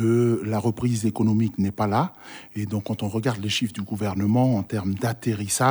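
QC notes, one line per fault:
3.96 to 5.48 s, GSM signalling bursts: a galloping dit-dit-dit of short buzzes at about 217 Hz, sitting roughly 30 dB under the main sound. A nearby 2G phone was signalling, and the audio circuitry rectified its radio bursts into audible buzzes.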